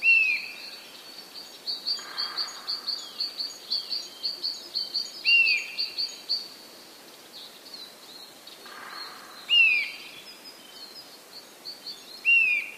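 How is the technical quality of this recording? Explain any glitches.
The recording has one recurring glitch. From 0.92 s to 12.75 s a click repeats every 1.32 s, about ten in all. The likely cause is clock drift buffer slips: two unsynchronised clocks, off by roughly 150 ppm, let the buffer creep until a handful of samples is dropped or repeated.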